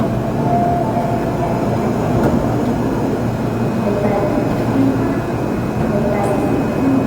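From start to end, the everyday sound carries plainly audible damage, likely from Opus compression in its music (CELT) mode. Band energies are preserved, so there are few dropouts or swirling holes, but bands starved of bits are filled with folded or synthetic content, making tonal parts grainy, rough and noisy. The degree of damage fits a low bitrate around 24 kbps. Bandwidth stays full, with content reaching about 20.1 kHz.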